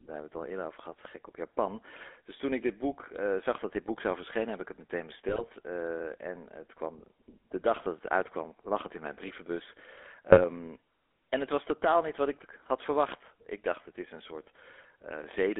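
The whole recording runs through a GSM full-rate codec at about 13 kbps. The band is 300 Hz to 3.5 kHz, and the pulse-driven vocal-tract model leaves a clearly buzzy, gravelly speech texture. GSM bit errors follow "heb ik het meteen" from 5.28 to 5.48 s, and then "het in mijn brievenbus" from 10.30 to 10.43 s. Corrupted decoder values distort frames into squawks and gargling pops.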